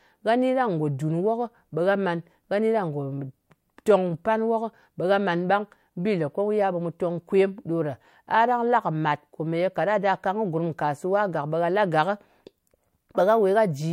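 No technical faults can be heard anywhere in the recording.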